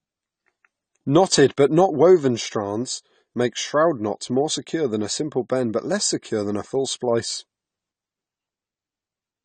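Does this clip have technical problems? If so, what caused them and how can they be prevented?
Yes. Throughout the speech nothing is present above 9 kHz, and the smearing is plainly audible. The likely cause is AAC compression with AAC-LC at a rate that fits a 32 kbps stream. The encoder lowers its cut-off and coarsely quantises the remaining spectrum. Encoding at a higher bitrate prevents this.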